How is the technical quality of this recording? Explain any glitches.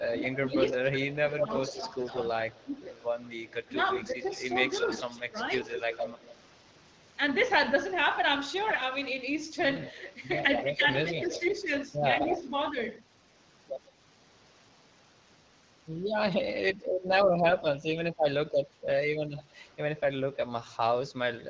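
The recording is a call with three recurring faults: suppression during double talk, echo leaking back, and bursts of AMR bit errors.

Speech suppressed in double talk, 0.09 to 2.73 s and 3.72 to 4.27 s: the echo canceller likely mistook overlapping talk for echo, ducking the voice by about 10 dB in pieces.

Echo leak, 0.93 to 6.36 s, 9.85 to 12.42 s and 19.37 to 20.0 s: a loudspeaker's canceller likely let its pickup through, so a copy returns about 150 ms late, loudest mid-clip at about 5 dB down.

AMR bit errors, 1.99 to 2.22 s, 8.67 to 8.84 s and 17.49 to 17.65 s: corrupted bits in wideband frames misplace excitation pulses, so the voice briefly turns hoarse, scratchy and gargly while keeping pitch.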